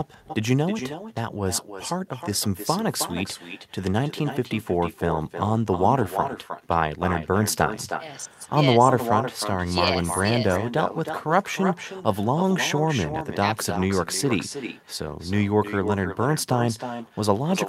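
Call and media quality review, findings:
Echo with no canceller, throughout the speech. Every phrase trails a quieter, thinner copy about 9 dB down, arriving roughly a third of a second later. Far-end loudspeaker feeding its microphone, returned over the network round trip with no echo cancellation.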